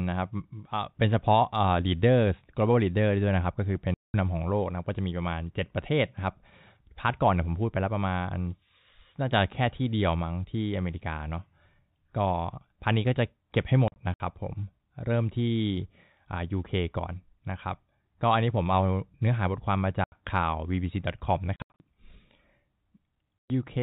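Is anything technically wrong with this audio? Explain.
Yes. Packet loss filled with silence: speech packets were lost and the receiver inserted silence in their place, at 3.94–4.14 s, 13.88–14.2 s (scattered), 20.04–20.12 s, 21.56–21.8 s (scattered) and 23.38–23.5 s. The hard-edged holes in the speech come in steps that fit 20 ms packets.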